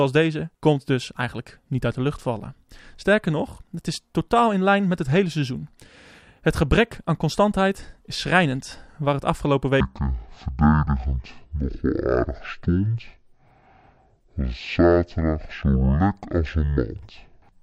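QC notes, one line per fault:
9.80–17.63 s, stereo read as mono: after "het afgelopen", the interleaved left and right samples are treated as one channel, so the speech plays at 0.5x speed and drops 12 semitones, a full octave, with a fainter mirror image appearing in the upper half of the spectrum.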